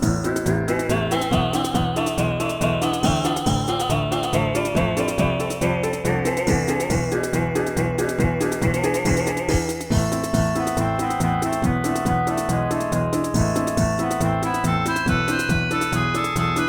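Throughout, a doubled audio track trails about 0.4 s behind at roughly equal loudness, likely a second capture path; waveforms show every transient repeated, spectrograms show a shifted twin.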